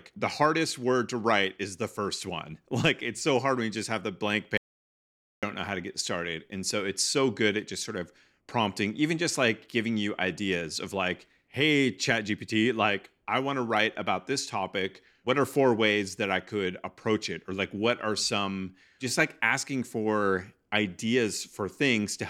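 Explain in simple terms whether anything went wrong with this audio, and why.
Something did go wrong. From 4.58 to 5.43 seconds, the speech suddenly stops and the recording goes completely dead for about 0.85 seconds, with not even the faint background hum of the room, and then the voice cuts back in partway through. This is an audio dropout to silence. The likely cause is that the microphone signal was briefly lost, through a loose connection, a failed link or an accidental mute, while the recorder kept saving pure silence. Whatever was said during that gap is lost.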